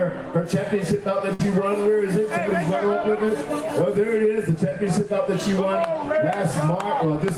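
At 1.33 s there's a burst of packet loss running to about 1.41 s. Around 60 ms of audio never arrived in time, so the receiver stretched out the last bit it had for roughly 57 ms, fading it down as it went. You hear that as a brief held buzz or hiss that sags in level, and then the sound jumps ahead, with whatever was in that stretch simply gone.

Later, from 4.69 to 4.73 s, there's a short concealed packet loss. This one's much smaller, with only about 20 ms missing. The decoder papered over it by continuing the preceding sound for around 18 ms and blending back into the real signal. It comes across as a quick smear or wobble rather than a dropout, and any very short sound right there can get swallowed.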